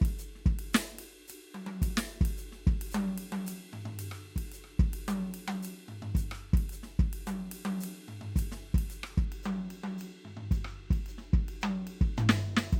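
Channel delay (comb filtering) sets in at 9.25 s and runs to the end of the music at 12.79 s. One channel lags the other by roughly two samples, about 0.05 ms, so summing them cancels energy near 10 kHz, dulling the top end.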